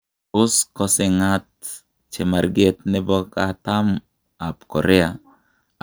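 Speech recording with no audible technical faults: nothing to flag at any point in the take.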